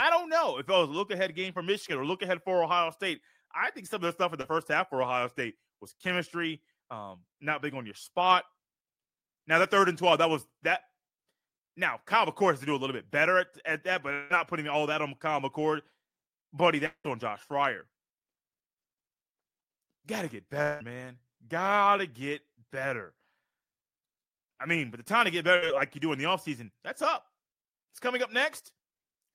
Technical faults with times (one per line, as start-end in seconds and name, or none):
4.41-4.45 short concealed packet loss
14.13-14.32 long network dropout
16.86-17.06 long network dropout
20.62-20.82 long network dropout
25.56-25.64 burst of packet loss